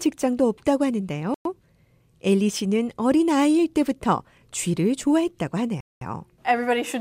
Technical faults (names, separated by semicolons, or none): Bluetooth stall